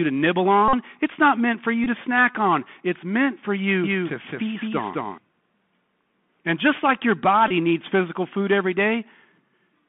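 Across the whole recording the speech sounds thin and boxed-in, with a granular hiss beneath it, scratchy s sounds and a gritty edge on louder passages. That is the Bluetooth CVSD headset codec at 64 kbps: a one-bit up-or-down tracker whose adaptive step lags fast, loud movement, so transients smear and quiet stretches fizz. The line passes only about 150 Hz to 3.5 kHz, which removes the low warmth and all the air above it.

From 0.68 to 0.75 s a short steady buzz replaces the audio, and a briefer buzzy tick follows at 1.84 to 1.88 s. Both are the Bluetooth headset packet repeated. Voice packets between headset and phone went missing, 48.8 ms in the first gap and 18.8 ms in the second, and the chip decoded the last good packet's bits over and over. Each repeat lasts 3.75 ms, so a run of them produces a hum near 267 Hz until clean packets arrive.

Between 3.84 and 5.18 s the speech is heard twice. 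A second full-band copy trails about a fifth of a second behind at roughly the same loudness, with no decay or room colour, and it starts and stops abruptly. This is a doubled audio track, most likely from the sound being picked up a second time through a slower path and mixed back in.

At 7.48 to 7.52 s the packet-repeat buzz returns briefly, this time covering 22.5 ms of lost audio.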